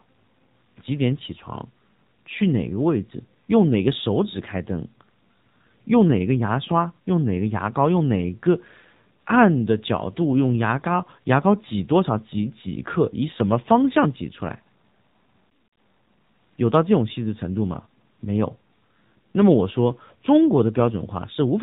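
From start to finish the speech carries the sound of an AMR narrowband mobile codec, and the damage is plainly audible. Everything is squeezed through an 8 kHz sampling path, so nothing above 4 kHz survives, leaving the voice boxed-in and telephone-thin. On top of that, the codec rebuilds the voice from a vocal-tract model fed by a few pulses per 5 ms slice, which gives it a buzzy, synthetic edge consistent with a low rate around 7.4 kbps.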